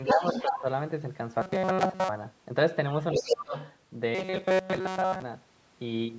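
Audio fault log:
0.07–0.61 s and 3.01–3.75 s, other side's voice leaking through: a second voice runs underneath the talker at roughly the same loudness. The likely cause is the talker's device playing the far end on a loudspeaker, with the echo canceller failing to strip that playback from the microphone signal. The residue therefore reaches the listener nearly at full strength.
0.14–0.23 s, 0.43–0.65 s and 3.12–3.55 s, speech suppressed in double talk: during the leaked-voice passages, the talker's own voice dips sharply, by about 10 dB, then about 15 dB, then about 20 dB in the longest stretch. Both voices overlap here, and the echo canceller, likely unable to tell its own talker from the loudspeaker echo, turned the whole signal down.
1.42–2.09 s and 4.15–5.23 s, robotic sound from repeated short buffers: the voice turns into a rigid metallic buzz fixed at 188 Hz, though it still loosely follows the speech contour. 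Most of each stretch, roughly two thirds or more, is made of repeated material. The likely cause is audio arriving too rarely, with the playback looping a fragment about 5.3 ms long while fresh audio is skipped. That loop length fixes the buzz pitch.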